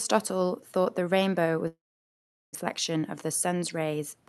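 From 1.67 s to 2.57 s the speech breaks into a short fading buzz and then near-silence or a low steady noise, before it resumes further on with about 680 ms of speech gone. This is likely a long network dropout: no audio arrived, and the receiver stretched the last sound before giving up.

From 2.74 s to 4.22 s the speech sounds hurried but keeps its pitch, running at about 106% speed. This is a jitter buffer speed-up: having built up a backlog, the receiver trimmed about a tenth of a second in many tiny pitch-period cuts to catch up.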